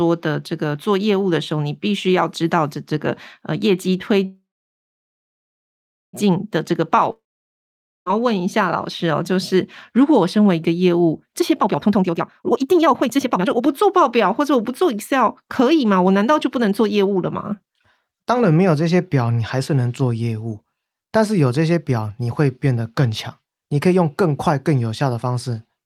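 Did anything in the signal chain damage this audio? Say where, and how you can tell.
Yes, three network-side problems. From 4.25 to 6.15 s there's a call audio freeze: the last sound smears into a fading buzz, then about 1.7 s of silence, and speech resumes where it stopped. That's likely packets stalling and the jitter buffer running dry, adding roughly 1.9 s of delay without losing anything.

At 7.12 to 8.08 s there's a long network dropout. Same fading tail into silence, but this time speech picks up further along. Roughly 0.94 s of audio never arrived and is simply gone, likely a real loss of packets rather than a hold-up.

Then 11.40 to 18.20 s sounds hurried but keeps the same pitch, running at about 128% speed. That's jitter buffer speed-up: after the backlog, the receiver trims short pitch-period chunks over and over to drain the excess, cutting out around two seconds in total.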